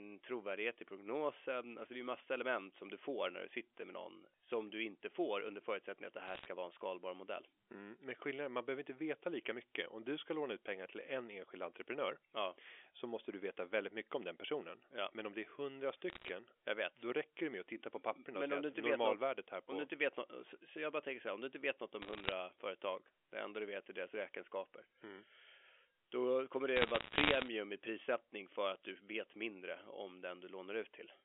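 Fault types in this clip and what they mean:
Bit errors on a digital phone line: flipped bits on the G.711 line each corrupt one sample, and hits on the sign or a high-order bit produce sharp ticks. Four short bursts of crackle sit over unchanged speech, near 6.3, 16.1, 22.0 and 26.8 s. The last, after "då kommer", is the longest and densest. On a waveform they appear as isolated single-sample spikes. On a spectrogram they show as thin vertical lines reaching the 4 kHz band edge.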